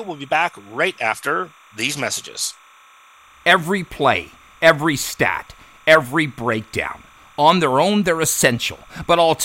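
From start to finish there's timecode bleed under the speech: linear timecode, running at 29.97 frames per second, leaking in from a nearby track or cable. Its square wave flips between roughly 1 and 2 kHz, so you get a steady chirpy warble sitting well below the voice.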